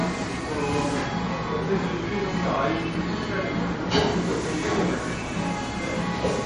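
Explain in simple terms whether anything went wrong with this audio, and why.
From start to finish the audio is dull above 10.5 kHz and has a watery, swirling quality that is plainly audible. That points to MP3 compression as the likely cause: with too few bits, the encoder chops off the treble and lets faint details flicker in and out.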